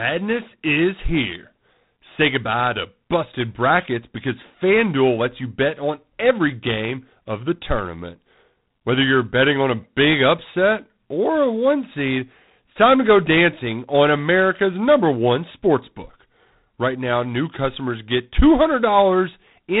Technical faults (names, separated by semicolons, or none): G.726 ADPCM